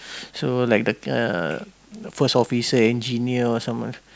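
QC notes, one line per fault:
No faults to note for this speech clip.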